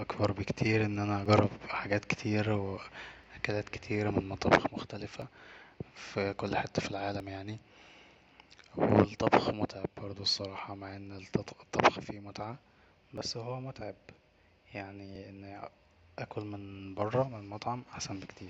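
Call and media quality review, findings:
Overlap between stream segments, speech. Segment timestamps overlap at roughly 2 s boundaries; the player trims the overlap from audio that was never duplicated, dropping about 5 to 12 ms each time. The result is a waveform jump heard as a click or tiny skip at 1.26, 3.24, 5.22, 7.20 (after "في كل حته"), 9.19, 13.18 (before "هو متعب") and 15.16 s (before "انا اكل من بره"). Probable component: segmenter or packager timestamping.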